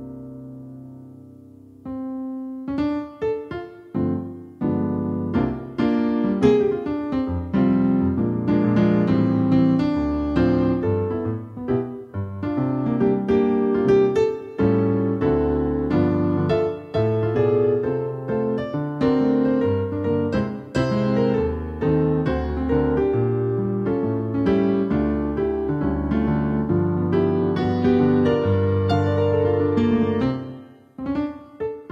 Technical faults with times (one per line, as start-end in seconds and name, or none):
27.24-31.91 adaptive stream at a lower bitrate